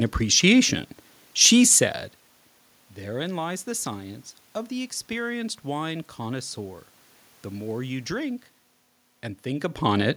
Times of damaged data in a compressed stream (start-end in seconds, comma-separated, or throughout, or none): none